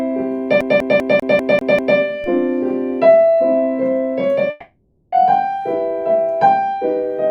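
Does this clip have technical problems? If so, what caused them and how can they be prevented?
Yes. From 0.61 to 1.98 s the clip has a CD stuck on one turn. A scratch throws the laser back one track each revolution, so the same 197 ms of audio plays seven times with a brief mute at each jump. The result is a fast, even stutter. Cleaning or replacing the disc and ripping with a secure, error-checking ripper prevents this.

At 2.24 s there is a DC step. The waveform's zero line jumps abruptly, giving a low thump, and the offset then decays away as if through a 2 Hz high-pass filter. The audio continues unchanged underneath. A DC-blocking filter at the input, and not switching sources or recalibrating converters mid-recording, prevents it.

From 4.50 to 5.13 s a long network dropout is the likely cause of a 620 ms gap. The receiver fills the whole gap with a fading, buzzy continuation of the preceding audio, and playback resumes further on without the lost portion. 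A larger jitter buffer, forward error correction and a more stable connection reduce such losses.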